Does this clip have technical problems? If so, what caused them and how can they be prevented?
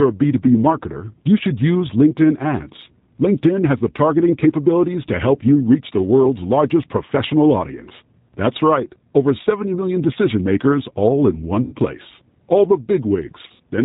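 Yes. The whole clip has the G.729 codec's dull, slightly rough, synthetic quality, with nothing above 4 kHz. That fits an 8 kbit/s G.729A-style link rebuilding speech from a filter, pitch and a few pulses. To prevent it, use a wideband codec wherever both ends support one.

There's VoIP packet loss concealed by the speech codec at 11.62 to 11.75 s, where about 100 ms went missing, and again at 13.48 to 13.63 s, where 80 ms was lost in patches across 160 ms, the longest gap being 60 ms. The decoder stretched its last pitch and filter into a fading sound, and the sound stays weak briefly afterwards. A steadier network path, a jitter buffer and forward error correction would keep those gaps from happening.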